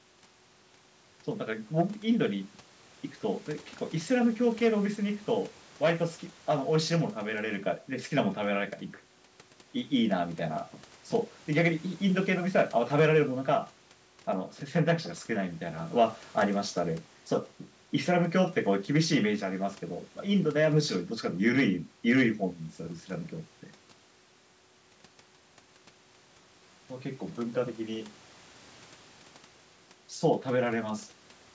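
Nothing here counts as a fault: the speech has simply passed through a call's microphone processing, which trims the deepest bass and leaves nothing above 8 kHz, just as that path normally does.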